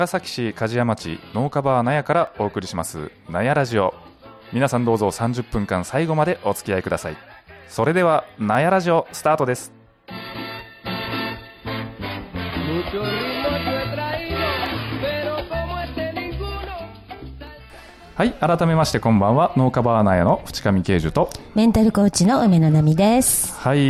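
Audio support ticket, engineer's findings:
Sharp single clicks at 2.27, 3.71, 8.55, 10.59, 14.66, 17.47 and 18.93 s. Each is isolated and instantaneous, with nothing audibly missing around it. Likely dropped samples: a fraction of a millisecond lost from the stream, so the waveform steps abruptly from one value to a later one. Spectrogram shows a thin full-band vertical line at each time. Waveform shows a discontinuity rather than a gap. Check buffer handoff in the capture/playback path.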